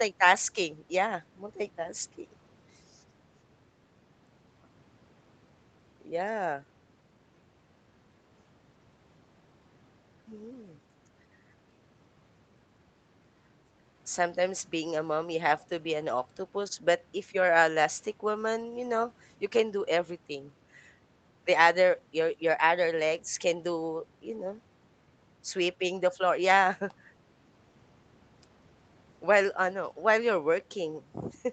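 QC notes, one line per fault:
No faults heard anywhere in this speech recording.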